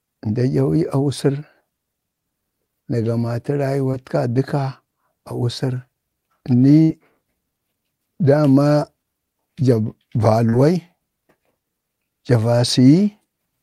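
Short concealed packet loss at 3.91 to 3.95 s and again at 10.49 to 10.55 s: each time a stretch of speech arrived too late, so the receiver extended the preceding sound to bridge about 20 ms and then 40 ms of missing audio, heard as a brief smear or wobble. A burst of packet loss at 6.83 to 6.91 s drops about 60 ms in a row. Concealment stretches the last sound into a fading buzz or hiss, and the speech resumes with that stretch missing.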